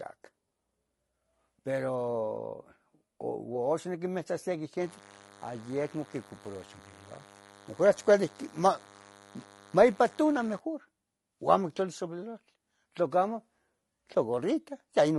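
Throughout the clip the speech is rough and grainy, with noise filling the gaps between harmonics and a dull, synthetic top band. This is likely low-delay AAC compression (AAC-ELD), whose short frames resolve pitch poorly; the damage suggests a low rate around 32 kbps.

From 4.80 s to 10.59 s a steady, thin buzz at 100 Hz with dense harmonics sits roughly 25 dB below the speech. This is DECT cordless phone buzz: radio bursts every 10 ms are rectified by the audio circuitry.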